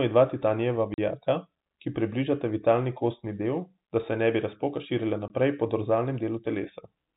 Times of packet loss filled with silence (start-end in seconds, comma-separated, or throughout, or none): 0.94-0.98, 5.28